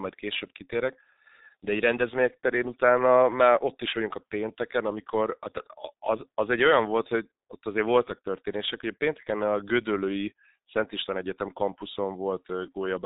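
From start to finish the speech carries G.723.1 codec damage, heavy throughout. Nothing passes above 3.8 kHz, and the coarse 30 ms frames with a slowly updated voice model leave it muffled and hoarse, consonants smeared, a sound that fits roughly 6 kbit/s coding.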